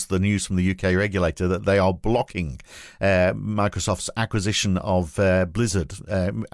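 Listening to this speech recording, nothing stood out as a technical problem at any point.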